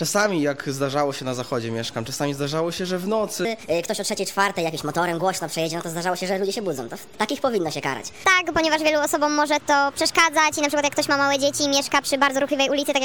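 From 3.45 s onward, a section at the wrong speed runs 1.35× fast, likely a clock mismatch; spectrogram harmonics jump up about five semitones.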